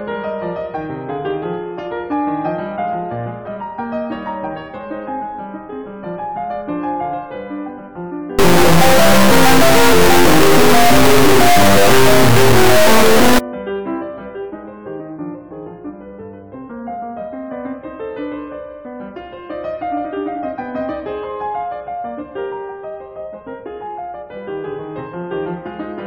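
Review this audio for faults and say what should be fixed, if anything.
From 8.39 to 13.39 s the music becomes an extremely loud, buzzing square wave. This is integer read as float, likely 32-bit integer samples decoded as 32-bit float. Values land near zero or far past full scale, so the output snaps between silence and clipping. To prevent it, take the sample format from the file header and check it before decoding.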